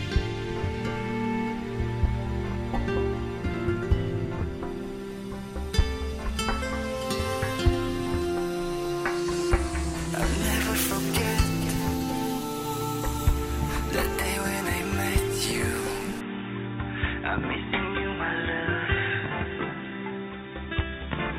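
At 16.21 s the sound abruptly turns dull and boxy, with nothing above 3.8 kHz, and stays that way to the end, carrying faint new background noise at about the same overall loudness. The likely cause is the input switched to a poorer device mid-recording.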